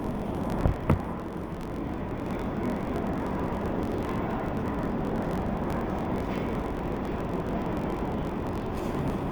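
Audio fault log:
Throughout: interleaved audio read as planar. Each 21.77 ms block of alternating left and right samples is split in half, each half taken as one channel and stretched across the whole block. The sound drops an octave (12 semitones) while the overall pace stays right, and the block joins cut a choppy, doubled texture at 45.9 Hz. A plain slowdown would also drag the timing, and a clean pitch shift would not chop or double the sound.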